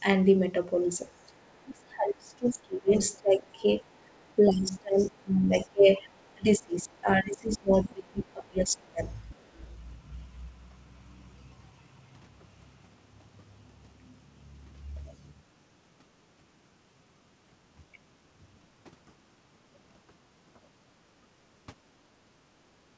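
From 0.84 to 1.59 s there's faint other-side voice leaking through, about 40 dB under the talker, likely residual echo from a loudspeaker. It returns at 2.3–3.19, 4.19–4.34, 4.99–5.66, 6.19–6.31 and 9.32–9.66 s, up to about 25 dB down. Between 1.63 and 9.03 s you'll hear speech suppressed in double talk. The talker dips by as much as about 30 dB for roughly five seconds in all, likely as the canceller turns everything down.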